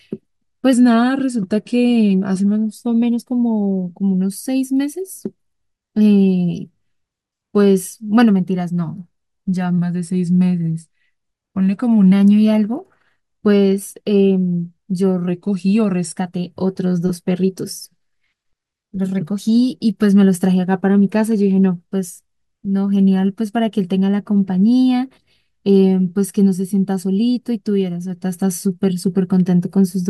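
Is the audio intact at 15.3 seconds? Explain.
No. From 15.29 to 16.18 s the speech drops abruptly about 6% slower and about 113 cents flat, then snaps back, likely a drift correction step. A clock-matching resampler briefly changed rate. Unlike gradual wow, the shift is a single clean step.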